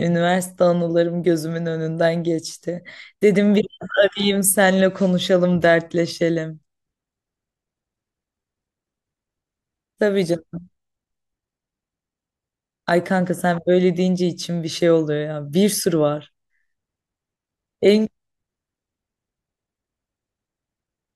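No technical faults are audible.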